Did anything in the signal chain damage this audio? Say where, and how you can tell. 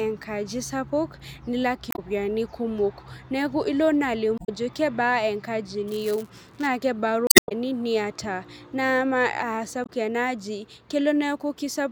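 Yes. Short glitches break the speech at 1.90–1.99 s, 4.35–4.49 s, 7.24–7.52 s and 9.83–9.90 s. That is damaged data in the compressed stream: the decoder misreads corrupted frames, loses sync and jumps to the next valid header.

From 5.87 to 6.68 s a robotic buzz at 172 Hz rides on the speech. This is buffer tearing at the driver or buffer stage, which fits a 256-sample buffer. In each period the writer and reader cross, splicing in a tiny sliver of audio from about 20 ms earlier with hard joins.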